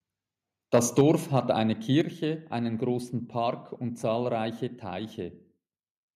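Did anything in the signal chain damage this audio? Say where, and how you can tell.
Yes. Between 0.74 and 1.39 s the loudest speech peaks turn harsh and crackly, with around one percent of samples flattened at the converter's limit, roughly 5 dB beyond the limit. This is microphone overload at the converter, likely from excessive input gain. Unlike codec distortion, the waveform tops are squared off.

At 1.01 s and again at 2.01 s, just before "einen großen", speech and background both drop about 4 dB in a single instant step. This is the microphone volume being stepped down, likely by the call processing's gain control reacting to the overload. A compressor would not behave this way: it would recover, and it would spare the noise floor.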